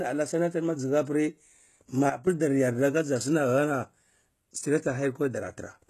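It's a speech clip with plainly audible codec damage all the way through, likely from HE-AAC compression at a low rate, which fits something around 16 kbps. Nothing survives above 12.3 kHz, and the treble that's there is rebuilt by copying lower bands upward, so its harmonics don't line up with the real ones. Then there's a sudden gain jump: from 2.10 to 2.27 s the level drops by about 12 dB in one step and comes back, the speech and the background noise moving together. That points to a gain change likely applied without any ramp.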